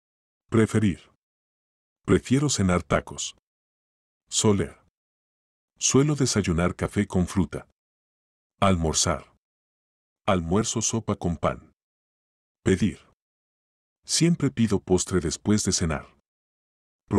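No technical faults can be heard anywhere in the audio; the signal stays continuous and stable throughout.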